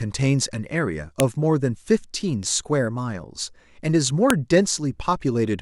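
The clip is speech with two sharp, loud clicks, at 1.20 s and 4.30 s. Each is a file header played as audio. Separate WAV pieces were joined without stripping their headers, so those header bytes play back as samples and snap at each join.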